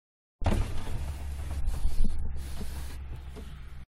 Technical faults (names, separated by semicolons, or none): damaged data in a compressed stream